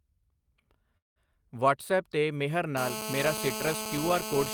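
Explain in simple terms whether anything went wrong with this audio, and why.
From 0.97 to 1.28 s the speech stalls, trails off into a fading buzz, then silence, and resumes at "ਵਟਸਐਪ 'ਤੇ ਮੇਹਰ" with nothing lost. This is a call audio freeze, likely from delayed network packets.

From 2.77 s to the end, a harsh, raspy buzz at 217 Hz sits steadily under the speech. This is GSM phone buzz from a nearby 2G phone on a call.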